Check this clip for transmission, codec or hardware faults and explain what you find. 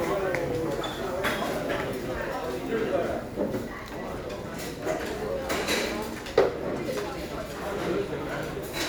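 Nothing stood out on listening through this audio.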